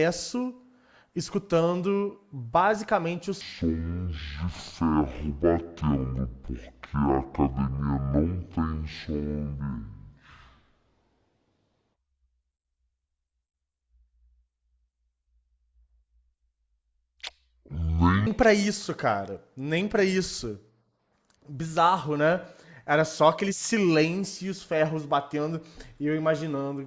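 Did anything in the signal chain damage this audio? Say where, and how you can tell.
Yes. From 3.41 s to 18.27 s the speech drops a full octave, 12 semitones down, and runs at half speed, with pitch and tempo shifting together by the same factor. That locks it to the playback stage as a wrong sample rate fault: the samples were clocked out at half their intended rate with no conversion. A 2:1 ratio like this fits 32 kHz material being played as if it were 16 kHz.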